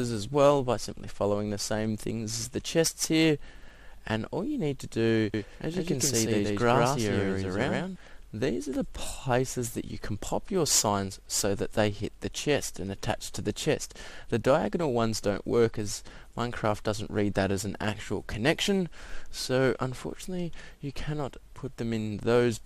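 A doubled audio track runs from 5.34 to 7.96 s: a second full-band copy of the audio trails the original by about 150 ms at roughly equal level, giving a distinct slapback repeat with no decay or room colour. It switches on and off abruptly at those points. The likely cause is the same signal being captured again through a slower path, or an edit leaving two copies overlapped out of step for that stretch.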